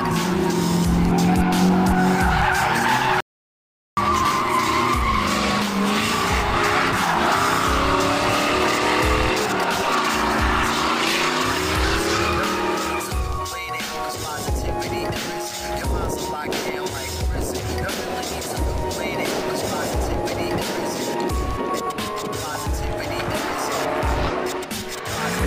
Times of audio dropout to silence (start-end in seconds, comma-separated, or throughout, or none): 3.20-3.97